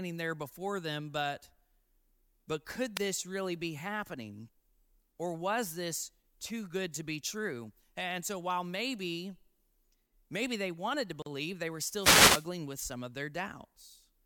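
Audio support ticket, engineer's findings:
Short swish of static at 2.95 to 2.99 s, between "but could" and "this really be happening"; longer static burst 11.97 to 12.48 s, after "they were", before "with some of". Wireless microphone noise hit: analogue FM radio link fading as reflections cancel, receiver noise rising into the audio.

Abrupt dropout of about 40 ms at 11.22 s, after "maybe they wanted to", sound resuming where it stopped, with smeared edges. Gap at a join of encoded pieces: separately encoded segments spliced untrimmed, encoder start delay and final-frame padding left in.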